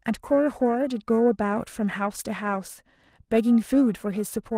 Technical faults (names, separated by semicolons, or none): periodic clock jitter